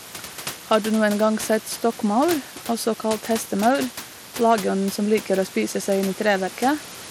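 Throughout the speech the top end is gritty and thin, with nothing above 16.9 kHz, likely Bluetooth SBC compression starving the upper sub-bands at a bitrate that points to about 96 kbps. From 4.50 to 4.53 s, between "også kalt hestemaur" and "som liker", a brief crackle marks hard clipping, with peaks overdriven by about 2 dB and cut flat. The room noise sits about 19 dB below the speech.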